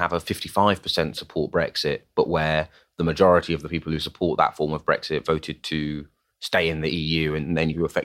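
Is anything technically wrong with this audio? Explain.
No, no technical faults.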